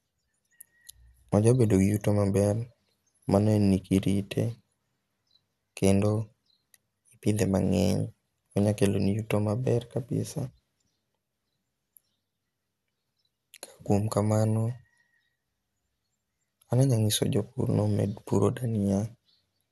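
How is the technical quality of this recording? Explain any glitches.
The speech is dull throughout, with nothing above 12.2 kHz and a gurgling, granular grain, likely MP2 compression at a low bitrate, around 80 kbps, switching off upper sub-bands and coarsely quantising the rest.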